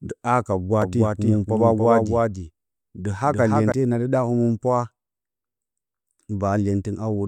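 From 0.82 s to 3.72 s the speech carries a doubled audio track: a second full-band copy trails the original by roughly 300 ms, sitting around 5 dB quieter. It has no decay or room colour, so it sounds like a flat, stuttering repeat, and it appears and vanishes abruptly at those times. The likely cause is the signal being captured again through a slower path. On a waveform or spectrogram, every syllable shape reappears about a third of a second later, fainter but identical.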